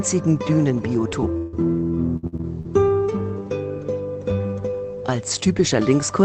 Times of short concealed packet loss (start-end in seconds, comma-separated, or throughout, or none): 1.09-1.13